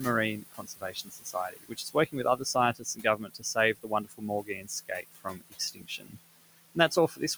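The noise suppressor artifacts run the whole way through: the room noise, which sits about 12 dB under the speech, gets pulled down by about 17 dB in the gaps and swells back under each phrase, so the background pumps. On top of that there's speech cut by the noise suppressor at 0.4–2.15, 2.74–3.57, 3.74–4.24, 4.43–4.72, 4.89–6.17 and 6.75–7.36 s. It mistakes quiet bits of the voice for noise and ducks them by up to about 21 dB, so soft consonants and word endings come out swallowed or faint.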